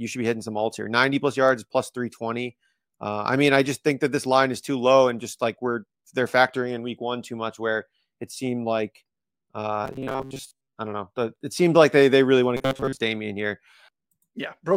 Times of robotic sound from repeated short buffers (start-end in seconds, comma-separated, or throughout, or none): 9.85-10.76, 12.57-13.04